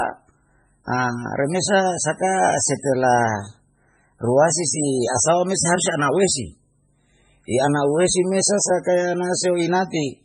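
Throughout, the speech sounds watery and swirly, with nothing above about 10.5 kHz, which is likely heavy MP3 compression at a very low bitrate, around 16 kbps.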